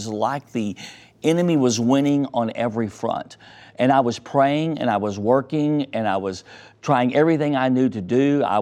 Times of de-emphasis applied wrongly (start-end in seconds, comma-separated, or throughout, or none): 2.09-8.62